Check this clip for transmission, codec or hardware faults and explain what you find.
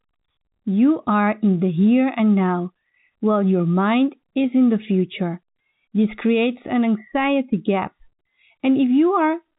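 Nothing here points to a transmission, codec or hardware fault; the speech simply carries the ordinary narrowband character of G.711 telephone coding, with nothing above about 3.8 kHz, exactly what a normal phone line would give you.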